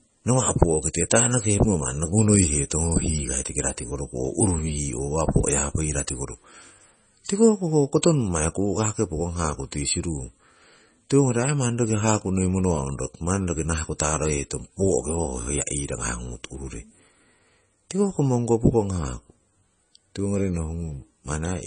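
A speech recording, the whole clip has a watery, swirling quality, with chirpy metallic edges on s sounds and softened consonant onsets, and there is no treble at all above about 9.4 kHz. This is heavy MP3 compression, likely at a very low bitrate of around 24 kbps: the encoder runs short of bits, cuts everything above a fixed frequency, and lets weak spectral lines drop in and out from frame to frame, producing that unstable, swirly texture. Three sharp attacks are each preceded by a short burst of hiss, lasting roughly 10 to 13 ms, at 0.93 s, 1.10 s and 13.99 s, the last just before "taroheiton poo'ko", and those attacks sound blurred. That is pre-echo. The codec spreads its quantisation noise evenly across a whole transform block, so when a loud onset falls late in a block, noise scaled for the loud part spills into the quiet moment before it.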